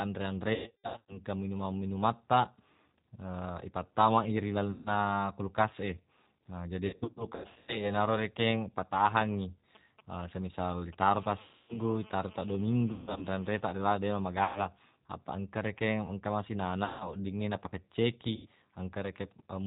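G.729 codec damage runs through the whole recording: the speech has passed through an 8 kbit/s coder that models each 10 ms frame with a vocal-tract filter, a pitch predictor and a few pulses. Nothing above 4 kHz survives, so the speech sounds band-limited, slightly rough and synthetic, and the coding damage is plainly audible throughout.

VoIP packet loss concealed by the speech codec first appears from 0.54 to 1.18 s. About 450 ms of audio is missing, scattered over roughly half a second, with the longest gap 150 ms. The decoder fills each hole by repeating its last pitch and filter at falling gain, so the speech smears into a buzzy tone or coloured noise that fades. Because each frame builds on the one before, it stays weak for a moment after the audio returns. Further losses follow at 4.71 to 4.93 s and at 6.87 to 7.86 s. The second of these is 450 ms of loss spread across 810 ms, giving a stuttering stretch of buzz and fading noise.

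GSM signalling bursts arrive from 9.75 to 11.09 s. A nearby 2G phone transmitting short groups of radio bursts is rectified by the audio circuit. The result is a galloping dit-dit-dit of brief 217 Hz buzzes, about 20 dB below the speech.

Concealed packet loss then resumes at 11.42 to 11.79 s, 12.92 to 13.26 s, 14.44 to 14.61 s, 16.85 to 17.12 s and 18.36 to 18.47 s. Each is another concealed stretch that fades.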